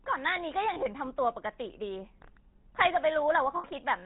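GSM full-rate codec damage runs throughout the speech. Its vocal-tract model, driven by sparse regular pulses at what sounds like 13 kbps, leaves nothing above 4 kHz and a buzzy, gravelly roughness. Lost GSM frames occur at 0.74 s, lasting about 20 ms, and at 3.56 s, lasting about 80 ms. In each gap the last good frame is repeated, holding the sound as a rough, metallic ring.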